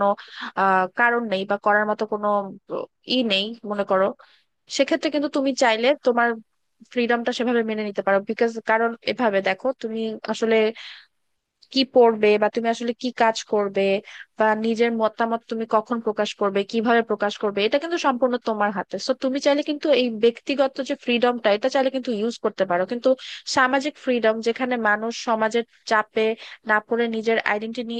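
No technical faults are audible.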